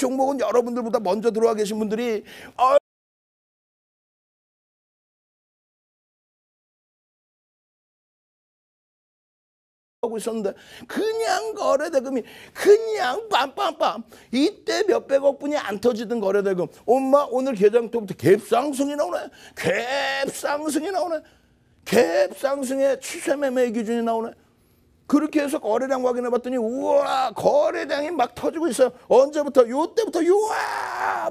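At 2.78 s the sound cuts off abruptly and the clip falls into silence, with no room tone or hiss at all, until it resumes mid-flow at 10.03 s. This is an audio dropout to silence lasting about 7.25 s, and whatever was happening in that stretch is simply gone. The likely cause is a lost input, such as a disconnected device, a failed link or an accidental mute, while recording carried on writing silence.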